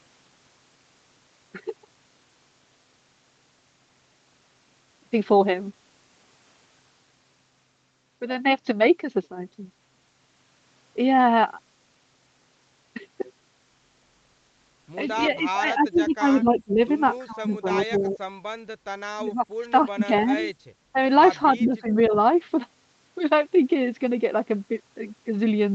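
Echo leak appears in speech at 15.22 to 15.28 s, 15.96 to 16.01 s and 20.40 to 20.44 s: brief, faint copies of the voice trailing by 305 ms, roughly 25 to 30 dB below the talker, likely from a loudspeaker on one side whose echo canceller let residual pickup return down the line. Speech suppressed in double talk follows at 15.39 to 16.81 s, 17.26 to 18.25 s, 19.17 to 20.33 s and 21.55 to 22.13 s, where the voice on the loudspeaker side dips by as much as roughly 20 to 25 dB (about 10 dB in the last stretch) while both sides speak, likely because the canceller cannot tell its talker from the loudspeaker echo and attenuates both. Background gated by the echo canceller shows as a 40 ms dip of about 9 dB in the room sound at 20.61 to 20.65 s, the canceller clamping the microphone hard while the loudspeaker played and then releasing it, all heard through a call path whose band stops at 8 kHz.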